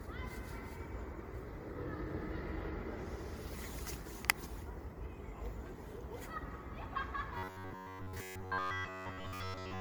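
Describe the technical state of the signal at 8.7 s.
Robotic sound from repeated short buffers covers 7.38 s to the end at 9.81 s: a rigid 93.8 Hz buzz, likely from a roughly 11 ms buffer looping while most of the real audio is skipped. Generation loss is present too, with a swirly, hollow smear and blurred attacks that fit around fifteen passes through an MP3 encoder near 93 kbit/s.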